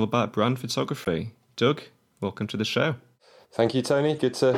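Corrupt frame decoded at 1.00 to 1.07 s and 4.16 to 4.20 s: damaged bits in a few compressed speech frames were decoded anyway, so misread gains and codes put energy at the wrong frequencies. The result is a fairly loud chirpy burst, then a much fainter blip.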